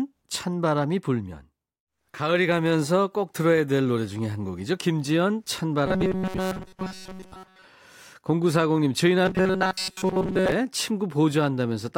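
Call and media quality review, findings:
Robotic sound from repeated short buffers, 5.86–7.65 s: new audio reaching playback too seldom, likely a jitter buffer or playout concealment looping a block of about 5.3 ms to fill the gaps. The loop imposes a fixed 188 Hz buzz, so the speech turns rigid and metallic and follows syllables only loosely.

Same fault again, 9.25–10.52 s: identical 188 Hz buzz. Most of the stretch is repeated material, and the real audio in between is skipped.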